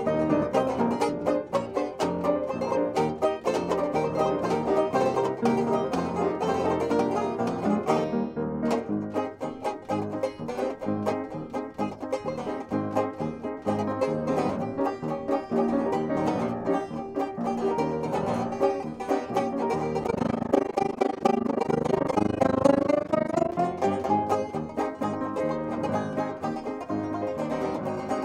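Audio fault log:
3.44–8.04 s, doubled audio track: a likely second capture path or misaligned edit adds a copy about 5 dB quieter, roughly 1.5 s late, starting and stopping abruptly.
20.04–23.55 s, overlap-add ripple: frames rejoined with overlap not summing to constant gain, so level swings about 60 dB around 30 times a second, a fast rough flutter.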